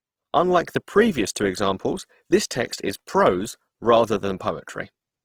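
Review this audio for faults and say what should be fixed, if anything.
Opus compression damage runs through the whole recording, and it's plainly audible: the speech comes across rough and grainy rather than swirly. That likely comes from the codec keeping each band's energy while filling missing detail with folded or noise-like content, which fits a 16 kbps encode in its music (CELT) mode. To avoid it, encode at a higher bitrate or work from a lossless master.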